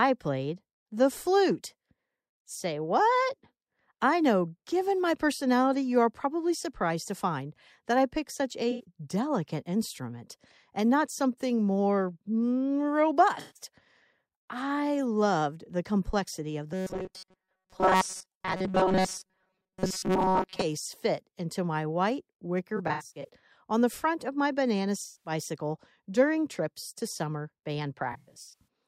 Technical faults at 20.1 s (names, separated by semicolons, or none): robotic sound from repeated short buffers